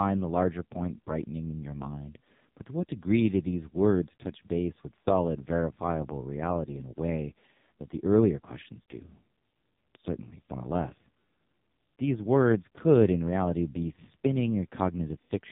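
Speech throughout carries heavy AMR narrowband mobile codec damage, with nothing above 3.8 kHz and a buzzy, synthetic quality that fits the lowest 4.75 kbps mode.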